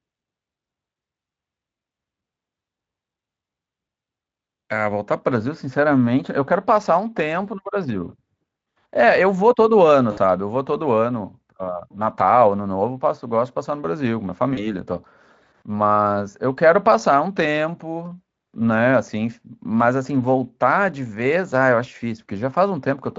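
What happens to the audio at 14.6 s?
At 14.6 s the speech hits VoIP packet loss concealed by the speech codec, from 14.53 to 14.73 s. About 40 ms of audio went missing, which fits two dropped 20 ms frames. The decoder extended the last sound, so it smears into a buzzy tone or coloured noise that fades. The voice stays weak briefly after packets return.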